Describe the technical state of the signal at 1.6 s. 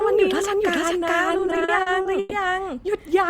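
Repeated stalls (stutter) cover 1.32 to 2.32 s, so 1.6 s falls inside them. Packets reached the receiver late or too slowly, and its jitter buffer kept running dry. Each time, the last sound was stretched out, with fading in the longer holds, until playback could continue. There are 11 such stalls, filling 310 ms, nearly a third of the span, and the longest lasts 120 ms. Nothing is lost, but the speech drags and stammers.

A doubled audio track also runs through the whole clip, including this moment. A second full-band copy of the speech trails the original by roughly 0.4 s at about the same loudness. It has no decay or room colouring, so it sounds like a distinct overlapping repeat rather than an echo. The likely cause is the signal being captured again through a slower path, or an edit leaving two misaligned copies.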